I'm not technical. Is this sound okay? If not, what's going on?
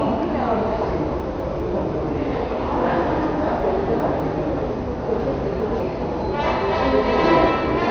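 No, there are two separate problems here.

The whole clip sounds dull and a bit gurgly, as if heard through an old digital radio. Nothing comes through above about 6.5 kHz, so the crisp top end is simply gone, and what's left has a grainy, bubbling texture. That's most likely MP2 compression squeezed too hard: the format chops the sound into frequency bands, and when it runs short of space it drops the top bands entirely and stores the rest roughly.

The second problem is chunks out of order, which happens three times. Small pieces of the sound, about a fifth of a second each, play in the wrong place. From 1.2 to 1.6 s one piece turns up one slot late. From 3.6 to 4.2 s and again from 5.2 to 5.8 s a piece turns up two slots late. Nothing is missing, but each of those moments sounds jumbled.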